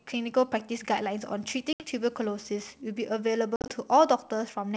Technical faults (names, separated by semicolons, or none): video or display buzz; packet loss on an ADPCM call